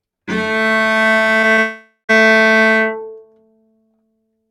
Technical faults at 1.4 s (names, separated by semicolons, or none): noise suppressor applied to music or sounds; short concealed packet loss